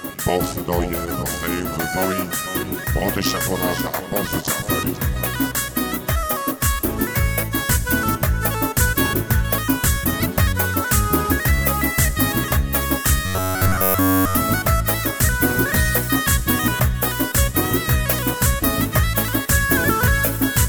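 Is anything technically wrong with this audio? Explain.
Yes. Robotic sound from repeated short buffers runs from 13.26 to 14.35 s. Throughout that stretch the sound collapses into a rigid, metallic buzz at 93.8 Hz that only loosely tracks what came before and after. The likely cause is audio arriving too rarely, so the playback side fills the gaps by looping a fragment about 10.7 ms long, which fits that buzz frequency. The fresh audio in between is skipped, and virtually the whole passage is made of these repeats.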